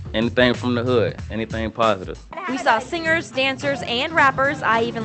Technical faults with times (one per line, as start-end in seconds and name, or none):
none